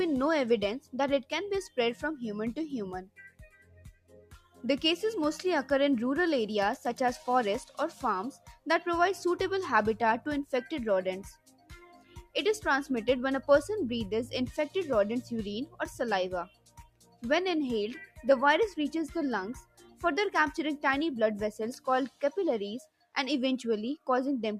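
Throughout, the level pumps and thins as held tones and tails sink by around 10 dB. A noise suppressor applied to music or sounds is treating sustained material as noise. Sound cut by the noise suppressor follows at 3.05 to 4.64 s (about 18 dB deep), 7.66 to 8.03 s (about 10 dB), 8.33 to 8.66 s (about 16 dB), 11.34 to 12.35 s (about 17 dB), 16.46 to 17.23 s (about 18 dB), 18.06 to 18.22 s (about 14 dB), 19.57 to 20.03 s (about 16 dB) and 22.84 to 23.16 s (about 18 dB). In each of these, steady or decaying sound drops away while the suppressor clamps down.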